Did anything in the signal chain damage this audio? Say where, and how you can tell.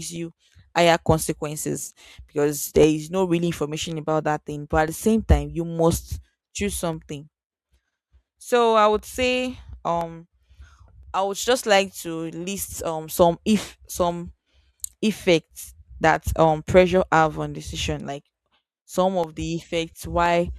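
Yes. Periodic USB or driver dropouts at the driver or buffer stage: roughly 1 ms gaps of silence every 1.024 s, about twenty, from 0.77 s to 20.26 s. They tick only over speech. A spectrogram shows evenly spaced thin vertical broadband lines, and the waveform shows brief flat cuts.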